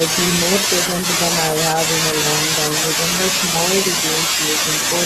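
A short bit of speech, and nothing technically wrong turns up anywhere in it.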